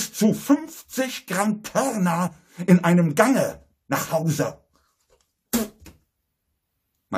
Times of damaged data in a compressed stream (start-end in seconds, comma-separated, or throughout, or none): 2.26